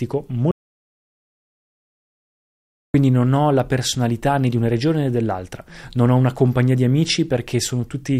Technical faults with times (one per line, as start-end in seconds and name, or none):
0.51-2.94 audio dropout to silence